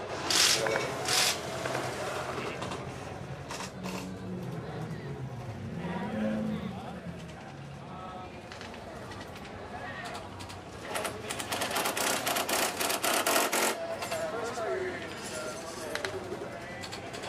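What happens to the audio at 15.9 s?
At 15.9 s, as throughout the clip, there is channel delay (doubling): one channel arrives about 93 ms late, which fits a 4096-sample buffer, and the mono sum plays both copies. Unlike room echo, the result is a single equal-level slap with no decaying tail.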